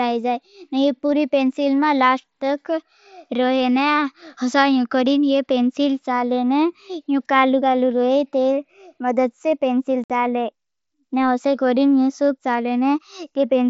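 At 10.04 s, just after "तेरी मदद से पेंसिल", unconcealed Bluetooth headset packet loss cuts a 60 ms abrupt hole, never smoothed or filled like concealed loss.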